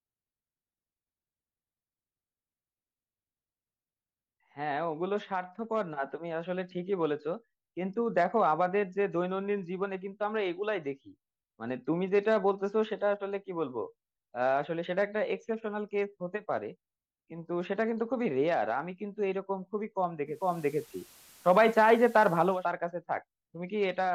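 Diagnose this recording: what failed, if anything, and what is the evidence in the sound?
The failure is at the receiver, a digital radio blending to analogue. From 20.25 s the sound cross-fades over 357 ms to the FM broadcast. The level shifts by about 4 dB and hiss rises to roughly 30 dB below the speech. It blends back at 22.68 s.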